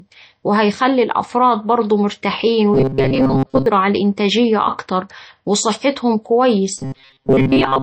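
From the start, the speech carries plainly audible MP3 compression damage, likely from a low bitrate that fits about 35 kbps. A spectrogram shows flickering, patchy blocks that give a watery, swirly edge.

From 2.74 to 3.66 s, and again from 6.78 s to the end, a robotic sound from repeated short buffers takes over. A roughly 7.5 ms stretch is likely replayed in place of most real audio, forcing a rigid 134 Hz metallic buzz. A spectrogram shows evenly spaced harmonic lines, and the waveform repeats a short shape.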